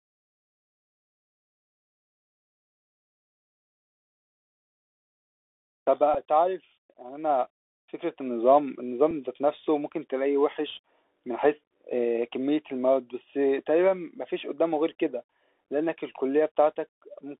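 The whole clip runs through a Bluetooth CVSD headset codec, squeezed into roughly 300 Hz to 3.6 kHz, with plainly audible grainy hiss and scratchy s sounds from its one-bit stepping. At 6.14 s there's a Bluetooth headset packet repeat, a quick tick about 7.5 ms long, which fits two lost packets being refilled with the last one's bits. Another single repeat lands at 9.11 s, just a tiny click.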